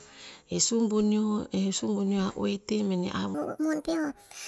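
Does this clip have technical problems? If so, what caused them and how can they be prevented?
Yes. From 3.34 s to the end at 4.47 s, a wrong sample rate takes over. The samples are clocked out 1.5 times faster than they were captured, which fits 16 kHz audio sent to a 24 kHz output with no conversion. The speech jumps about 7 semitones higher and sounds hurried. To prevent it, pass the true sample rate along with the audio, or resample to the output device's rate before playback.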